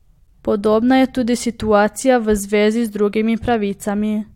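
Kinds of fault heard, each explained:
No technical fault can be heard anywhere in this speech recording. There is nothing here that belongs in a list of fault kinds.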